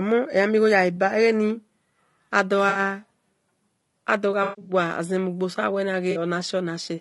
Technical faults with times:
0.00-7.01 low-delay AAC compression
0.96-0.98 AAC frame loss with concealment
2.69-2.79 AAC frame loss with concealment
4.43-4.73 AAC frame loss with concealment
6.11-6.16 AAC frame loss with concealment

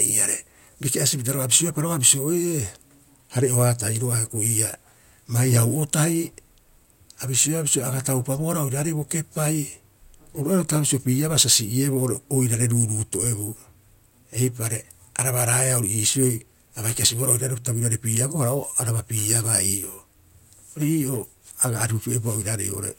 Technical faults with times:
none

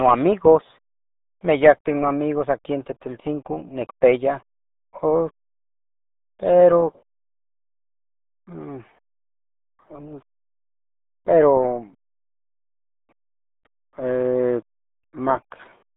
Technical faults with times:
0.00-15.96 RealAudio 14.4 codec

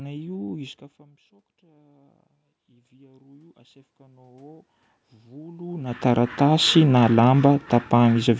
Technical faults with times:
1.61-4.61 automatic gain rising
5.22-6.77 automatic gain rising

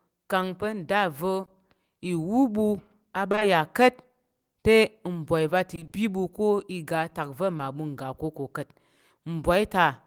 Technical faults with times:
1.41-1.49 short concealed packet loss
3.31-3.43 short concealed packet loss
5.75-5.95 repeated packet loss (robotic sound)
7.57-7.61 short concealed packet loss

